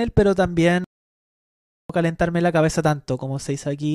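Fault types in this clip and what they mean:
Playback stall: the player likely ran short of data or had its thread blocked, so output halted. The speech cuts off mid-flow at 0.84 s and stays silent for about 1.05 s, resuming at 1.90 s.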